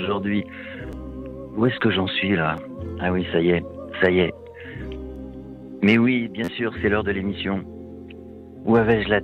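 At 0.92 s and again at 2.57 s there is a repeated buffer: fresh audio missed its deadline, so the output replayed the previous block once, about 11.6 ms long, which fits a 512-sample buffer. Each is heard as a brief click with a hard join, with around 10 ms of sound dropped. From 6.44 to 6.48 s the same block plays three extra times, forming a short buzzy stutter and losing around 40 ms.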